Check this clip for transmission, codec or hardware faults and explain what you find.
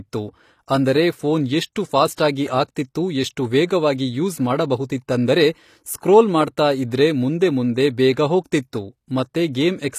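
Two faults are audible: codec damage that runs through the whole speech recording, and one pre-echo.

Throughout, the treble sounds synthetic. Sibilants come out gritty and metallic, and nothing is present above 14.9 kHz. This is plainly audible and is likely HE-AAC compression at a low bitrate, consistent with about 24 kbps. Only the lower spectrum is truly coded. The upper bands are rebuilt by copying lower content upward under a coarse envelope, so the harmonics above the crossover don't line up with the real ones.

From 2.14 to 2.18 s, a short hiss of about 43 ms arrives just before a sharp onset, and the attack itself sounds softened and smeared. This is pre-echo. The transform codec spreads quantisation noise evenly across its block. Because the loud attack sits late in that block, noise sized for it also fills the quiet stretch before it, where nothing masks it.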